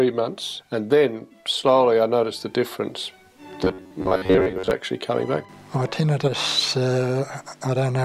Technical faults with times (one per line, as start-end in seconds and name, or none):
3.64-4.71 robotic sound from repeated short buffers